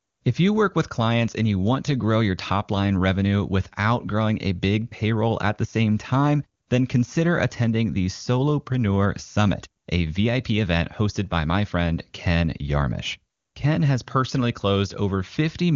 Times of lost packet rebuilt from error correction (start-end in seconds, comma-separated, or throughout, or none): none